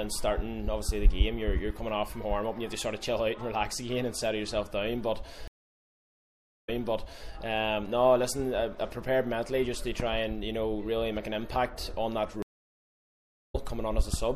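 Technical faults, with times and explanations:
Throughout, MP3 compression: the whole clip has a watery, swirling quality and dull treble, plainly audible and most likely from MP3 encoding at a low bitrate, which fits about 64 kbps. Short of bits, the encoder cuts the top end and drops weak frequency lines that flicker on and off frame to frame. Unlike a simple low-pass filter, the damage shifts and bubbles over time, and attacks are smeared.
5.48–7.30 s and 12.42–13.56 s, stream reconnect: each time the sound stops for about 1.2 s and then about 1.1 s. It then resumes at a different point, repeating roughly 0.63 s in the first case and skipping ahead about 0.2 s in the second. The connection dropped and a fresh decoder restarted mid-stream, so its first frame fades in. A plain dropout would pick up where it stopped; here the timeline jumps.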